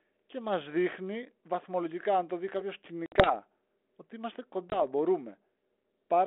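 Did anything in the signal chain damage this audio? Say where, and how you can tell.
Yes, network packet loss on an ADPCM call: after "αν το δει κάποιο" (3.06–3.34 s, about 60 ms lost) and "ότι είμαστε" (4.7–4.82 s, 20 ms). The waveform shows hard-edged silent gaps, then slightly distorted speech as the decoder's predictor resynchronises.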